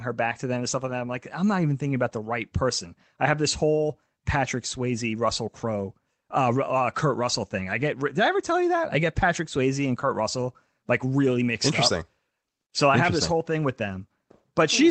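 No technical faults can be heard in the speech. It has gone through a working call path whose codec trims the highs above about 8 kHz, which points to an Opus link at roughly 32 kbps.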